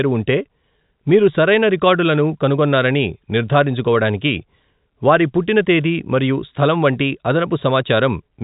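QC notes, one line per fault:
Nothing stood out on listening to this speech, which carries the narrow telephone band expected of G.711 coding.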